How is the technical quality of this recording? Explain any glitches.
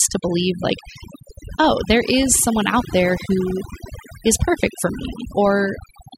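The recording is marred by one fault, overdone noise removal, present throughout. Pauses drop to near silence scattered with twinkling specks. A noise reducer set too aggressively is cutting whole frequency bands whenever they approach its noise estimate, taking quiet vocal detail along with the noise.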